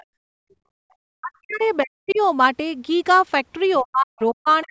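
From 0.00 to 0.04 s, a faint second voice sits roughly 30 dB under the speech. This is likely the other side's voice leaking through past the echo canceller.

From 0.04 to 0.91 s, the room sound falls away, by about 34 dB at its deepest. This is background gated by the echo canceller while the loudspeaker played.

From 1.19 to 1.61 s and from 1.83 to 2.20 s, the talker's speech dips hard, by roughly 40 dB. This is likely speech suppressed in double talk, with the canceller ducking both voices.

From 2.08 to 2.18 s, a scrap of the other voice leaks through again, faint and far below the speech. Echo residue is the likely source.

From 3.80 s to the end at 4.70 s, the speech is pushed down once more, by roughly 40 dB. Double-talk suppression is the likely cause here too.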